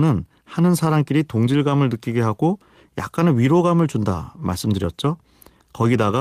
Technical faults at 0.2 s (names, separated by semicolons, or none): none